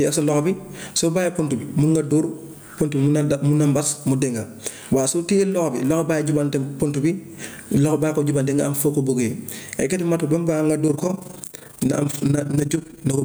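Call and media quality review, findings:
Gain pumping, whole clip: gain ducks under each loud bit, roughly a 20 dB swing. Likely mic gain cranked way too high, with a fast limiter/compressor slamming it down on peaks. Squashed dynamics.

Overlap-add ripple, 10.88 s to end: fast rough tremolo, level dipping about 11 dB around 30 times a second. Frame-based processing stage whose windowed overlap doesn't sum flat, so gain wobbles once per frame.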